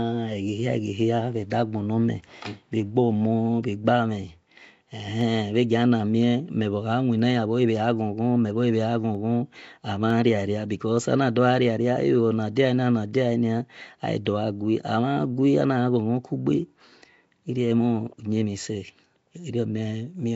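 Throughout, the speech carries a rough, hissy halo and a smeared, underwater quality, likely Nellymoser compression filling starved bands with noise, consistent with roughly 32 kbps. Sharp single clicks land at 5.21, 9.15 and 10.10 s, likely dropped samples, where a fraction of a millisecond vanished and the waveform jumped abruptly. At 14.25 s a short hiss smears in about 10 ms ahead of a sharp attack, pre-echo from coding noise spreading backward across the transform block.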